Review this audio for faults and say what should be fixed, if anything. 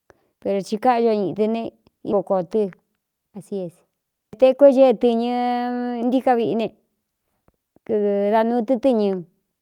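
Skip ahead at 2.12 s: roughly a fifth of a second of speech is dropped, and playback jumps straight to later audio with no gap.

Jitter buffer speed-up from 2.23 to 3.52 s: the receiver trims short pitch-period pieces, about a tenth of a second in total, so speech runs about 7% fast at unchanged pitch.

To prevent both, size the jitter buffer to absorb delay bursts without overflowing, and shed excess delay gradually rather than discarding audio.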